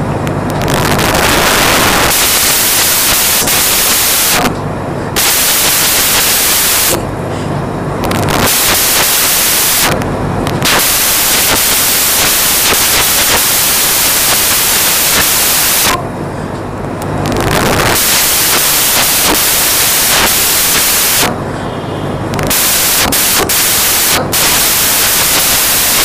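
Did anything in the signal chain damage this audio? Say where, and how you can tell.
Yes: sample-format conversion built samples from the wrong bytes, so low bits dominate and the whole clip is loud, harsh broadband noise, close to white on loud passages.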